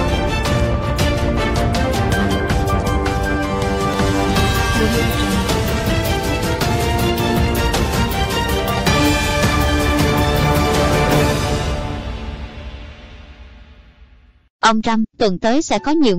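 The capture software likely fell behind and let the hardware overwrite its samples before collecting them, a dropped buffer (overrun), at 3.94 s and again at 14.81 s. Each time roughly five milliseconds of audio is lost and the material on either side is spliced straight together, with no gap of silence. The result is the sound jumping slightly forward at each point.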